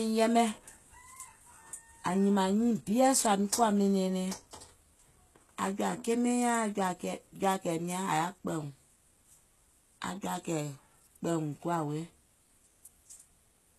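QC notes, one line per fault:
Throughout, likely HE-AAC compression: the speech treble stops at about 12.3 kHz yet stays bright, with gritty, lispy s sounds from treble copied up from lower bands. That distinguishes it from a plain low-pass, and the plainly audible damage fits a bitrate near 16 kbps.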